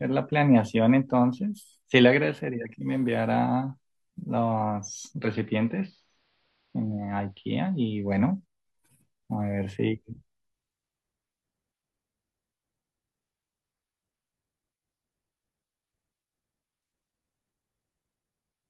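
A speech recording where, from 5.16 s to 8.15 s, you get a classic case of a digital radio blending to analogue. The receiver lost its digital stream and cross-faded over about 175 ms to the station's AM broadcast, so the treble is cut back, the level drops by about 3 dB, and a faint hiss sits roughly 40 dB down. At 8.15 s it blends back to the full-band digital signal.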